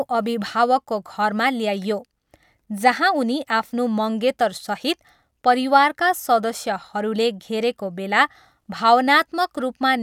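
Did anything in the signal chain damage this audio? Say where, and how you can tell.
No, nothing in the chain audibly damages this speech recording: the level, spectrum and timing stay steady throughout, with no dropouts, distortion or other defects introduced at any stage.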